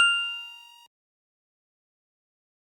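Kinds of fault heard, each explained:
No kinds of fault are heard in this clip.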